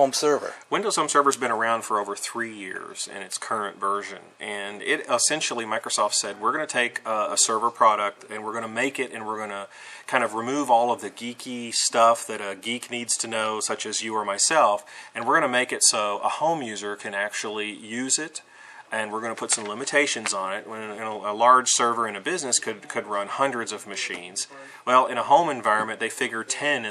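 No technical faults can be heard in the audio.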